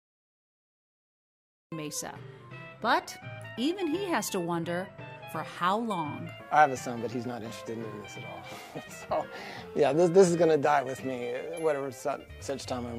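Capture began late, so the opening 1.72 s holds only digital silence, and the audio then cuts in abruptly at 1.72 s partway through an ongoing sound. This cut-off start leaves no natural attack or fade-in, so the first sound arrives already at full level.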